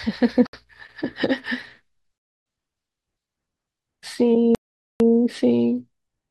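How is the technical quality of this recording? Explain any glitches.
The speech drops out three times, at 0.47 to 0.53 s (66 ms), 2.18 to 2.46 s (278 ms) and 4.55 to 5.00 s (452 ms). The likely cause is a Bluetooth stall: radio interference delayed packets, the headphones' buffer emptied, and playback halted until retransmissions caught up. Each time, the speech cuts abruptly to full silence and then resumes. The gaps grow longer through the clip.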